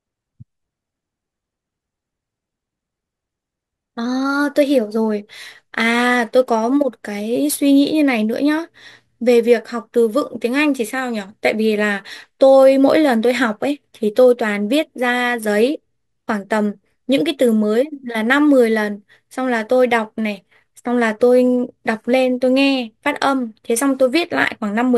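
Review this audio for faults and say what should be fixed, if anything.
Sample clock jitter runs throughout. Random timing error of a few microseconds adds a faint hiss, roughly 35 dB below the speech, that grows on loud, bright syllables and vanishes in pauses. A spectrogram shows diffuse high-frequency haze following speech energy. Prevent this by clocking the converter from a clean, low-jitter reference.

From 4.06 to 4.97 s the speech plays 5.48% fast and 92.3 cents sharp, then snaps back. This is likely a drift correction step, where clock-matching software briefly changed the rate. The spectrogram's harmonics jump upward and back, and the waveform looks squeezed in time. Prevent this by adjusting the rate gradually.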